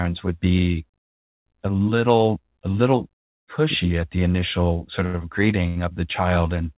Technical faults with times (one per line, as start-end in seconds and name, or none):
5.06-5.16 short stall from a late packet
5.68-5.78 short stall from a late packet